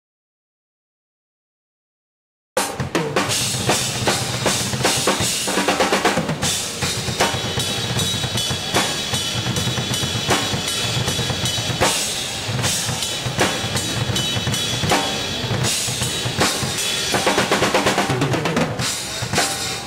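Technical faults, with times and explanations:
0.00–2.57 s, audio dropout to silence: the clip opens in complete silence, already under way from the first sample, with no room tone or noise floor, and sound then arrives abruptly mid-flow at 2.57 s rather than fading in. Likely the input was lost, and zeros were written until it returned. The waveform is a flat line, and the spectrogram is fully blank across all frequencies until a hard vertical edge at 2.57 s.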